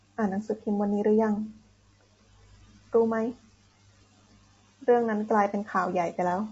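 Speech, with coding damage from start to finish. The voice sounds rough and grainy. Noise fills the gaps between the pitch harmonics. Nothing is present above 7.8 kHz, so the top band is cut off. These traits point to low-delay AAC compression, likely AAC-ELD at a bitrate around 24 kbps. Its short frames resolve the harmonics poorly and use up bits. At this rate the damage is plainly audible.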